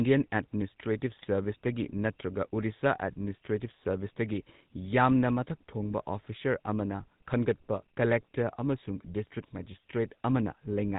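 From start to finish the speech has a buzzy, gravelly roughness, with everything above 4 kHz missing, so sibilants sound dull and clipped. This is the GSM full-rate codec, and its damage is plainly audible. It runs at 13 kbps, modelling the vocal tract as a filter and driving it with a sparse train of regular pulses that keep only one excitation sample in three. That coarse excitation is what turns the voice grainy.

From 1.16 to 1.25 s the sound breaks into a short gargling squawk with a pop in level, lasting about 90 ms. These are GSM bit errors. Corrupted bits reached the decoder, and wrong filter, pitch and gain values bent the spectrum and jolted the loudness for a few frames. The span fits roughly four 20 ms frames, and the density of damage points to an error rate of around 1%.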